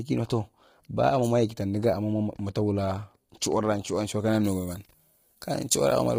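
A speech clip with heavy coding damage throughout, most likely from low-delay AAC compression of the AAC-ELD kind, at a rate that fits about 24 kbps. Its short frames resolve the harmonics poorly, so the voice sounds rough and grainy, with noise between harmonics and nothing above 15.6 kHz. From 4.44 s to the end, just after "chiwur’ra shuwan shuwan kayara", pre-emphasis was left on, with a treble boost resembling the 75 µs FM curve and no matching cut. The top end runs about 13 dB hot at 10 kHz relative to 1 kHz, making the sound thin, bright and sibilant.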